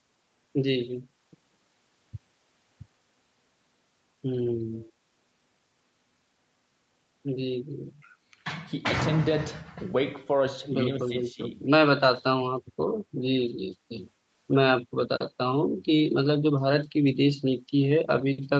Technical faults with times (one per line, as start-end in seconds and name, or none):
4.73-4.92 echo leak
11.09-11.41 speech suppressed in double talk